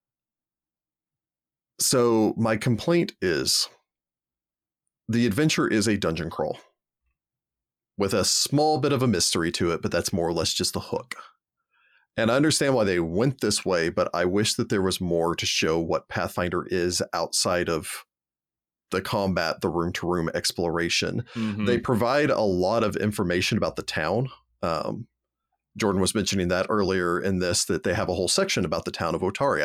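No technical faults can be heard anywhere in the speech.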